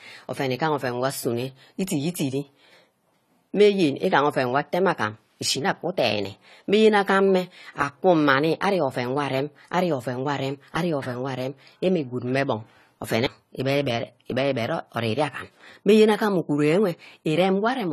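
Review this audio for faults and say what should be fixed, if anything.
Throughout the recording the speech sounds dull and smeared, with a warbling, fizzy edge on sibilants and held vowels, and nothing at all above 14.1 kHz. This is AAC compression, likely AAC-LC at a low bitrate, which fits something near 32 kbps. The encoder cuts the top of the spectrum and quantises the remaining bands so coarsely that gaps open and shift from frame to frame. To prevent it, keep an uncompressed master or encode at a substantially higher bitrate.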